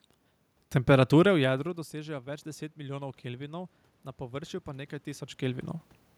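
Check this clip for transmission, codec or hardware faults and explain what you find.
One fault is present: automatic gain rising. From 1.35 to 5.74 s the level climbs by about 7 dB as the gain control reacts to input that dropped by about 18 dB. Voice and room noise swell together, which separates it from a talker simply moving closer.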